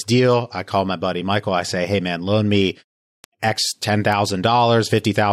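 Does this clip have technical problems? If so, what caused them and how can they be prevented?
Yes. Bit error spikes give single sharp ticks at 3.24 s, 4.12 s and 4.97 s, peaking at about -15, -9 and -21 dBFS. Each is one flipped bit forcing a sample or three to jump by a power of two, then return. Error-checked memory and links prevent it.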